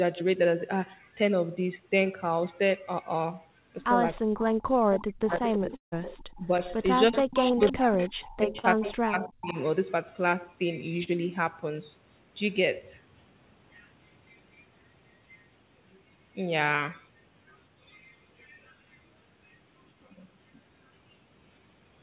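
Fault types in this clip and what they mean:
Speech suppressed in double talk: the sound dips deeply, up to about 40 dB, from 4.24 to 6.52 s and 7.10 to 9.55 s, likely from an echo canceller ducking simultaneous talk.
Echo leak: a fainter delayed copy, about 10 dB down and trailing by 323 ms, runs from 4.91 to 9.62 s, likely a loudspeaker echo the far-end canceller missed.
Long network dropout: at 5.76 s the sound briefly smears on, then goes silent for about 130 ms, with 160 ms lost, likely because packets stopped arriving.
Short concealed packet loss: quick smears or wobbles at 7.52, 8.59 and 11.03 s, where 20 to 40 ms went missing and the receiver stretched the preceding sound.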